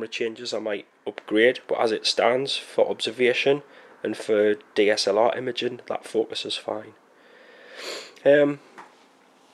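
Sudden gain jump at 1.16 s: the level steps up by about 5 dB between adjacent samples and holds there to the end. Sound and background noise rise together, which points to a digital gain change likely applied instantly, without a ramp.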